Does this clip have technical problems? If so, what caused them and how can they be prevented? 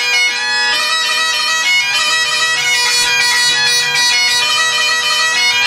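No, there are no technical faults.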